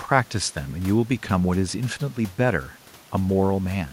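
Nothing here to flag, as there are no technical faults anywhere in this bit of speech.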